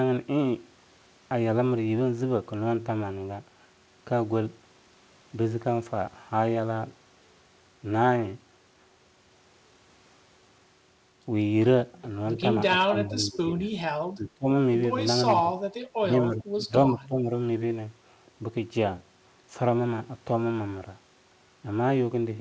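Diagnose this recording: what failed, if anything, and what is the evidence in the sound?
Speech suppressed in double talk, in call processing, at 12.85–13.4, 14.01–14.46, 15.35–15.46, 15.99–16.13, 16.31–16.71 and 16.93–17.33 s. The speech dips or breaks up in short pieces of about a tenth to half a second, by roughly 5 dB at the mildest and about 20 dB at the deepest. The likely cause is an echo canceller that, with both ends talking, could not separate the talker from loudspeaker echo and attenuated everything. The call path's band limit at 8 kHz is steady throughout.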